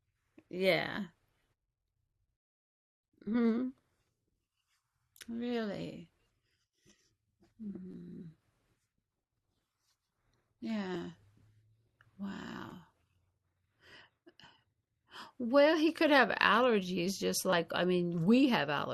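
At 0.96, 2.27, 10.94 and 12.70 s, and from 7.92 to 7.94 s and 17.50 to 17.53 s, new audio arrived late and the device replayed its last roughly 11 ms block, a repeated buffer fault that fits a 512-sample buffer. The two longer spots repeat twice. Each one is heard as a brief click or buzz.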